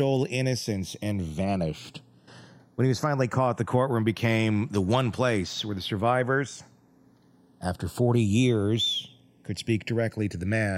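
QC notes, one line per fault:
throughout, channels drifting apart: the two sides run on slightly mismatched clocks, so their offset creeps to about half a millisecond, giving slow flanging in mono.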